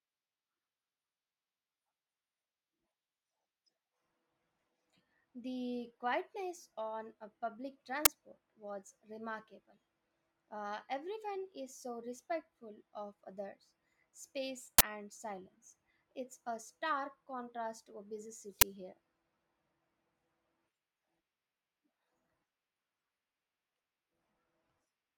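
A speech clip in which the playback path three times played an uninitialised buffer, sending a block out before any audio had been written to it. Leftover memory was read as samples, so each event is a brief, loud crack or burst of digital noise. The first is at 8.05 s, after "quietness on a public". The second runs from 14.78 to 14.81 s, after "respectful of others space". The third is at 18.61 s, after "contrast to a busy". The burst lengths fit 512-, 1024- and 512-sample buffers.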